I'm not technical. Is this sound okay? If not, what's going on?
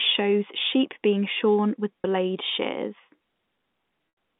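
No. There are two brief dropouts from packet loss with pitch repetition. At 2.03 s, a tiny gap is patched by repeating the last bit of voice, heard as a short buzzy hold. From 4.09 to 4.17 s, a longer gap fades toward silence.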